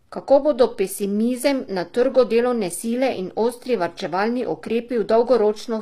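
Speech, likely squeezed through low-bitrate HE-AAC coding around 24 kbps, has treble rebuilt by band replication throughout, leaving gritty, lispy sibilants and nothing above 14.9 kHz.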